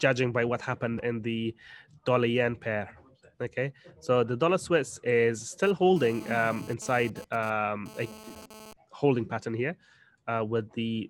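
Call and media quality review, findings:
GSM phone buzz, 5.63–8.73 s. Hard raspy buzz near 217 Hz, rich in harmonics, about 20 dB below the signal. Nearby 2G phone transmitting data bursts; audio circuit rectifies the RF pulses.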